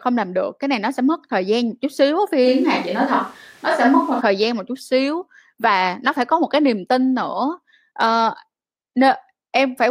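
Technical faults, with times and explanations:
2.47 to 4.20 s, switch to a distant microphone. Speech turns suddenly hollow and thin, at similar level, starting at "thời gian một chút". The close microphone likely dropped out.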